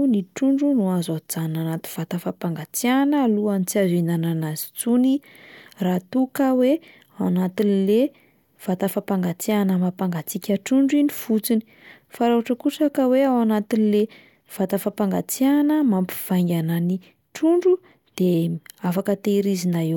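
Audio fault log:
No technical faults heard anywhere in this speech recording.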